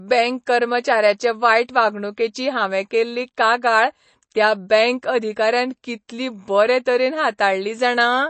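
A speech clip with audible MP3 compression throughout: nothing above 8.3 kHz and a watery, swirling texture, which fits a 32 kbps encode and is likely the cause, unlike simple low-pass dulling. Just after "बरे तरेन", at 7.38 s, pre-echo puts about 13 ms of hiss before an attack, smearing it. Unlike a click, the noise comes ahead of the sound rather than on it.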